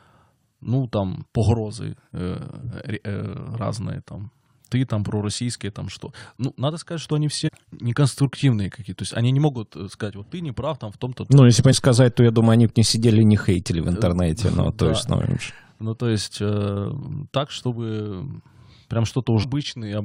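Damaged data in the compressed stream makes the decoder misread frames, producing glitches of about 22–24 ms at 7.47 s (after "надо сказать что они"), 11.72 s (after "если бы") and 19.42 s, visible as thin broadband spectrogram streaks.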